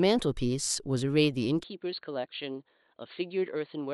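A speech recording whose sound changes abruptly at 1.63 s and stays changed to the end: everything above 4.5 kHz disappears, the level drops by about 10 dB, and a faint new background noise appears, roughly 55 dB below the speech. There is no gap at the change. The likely cause is the input switched to a poorer device. A filter or EQ change would only alter tone, but here the bandwidth, level and noise floor all shift together.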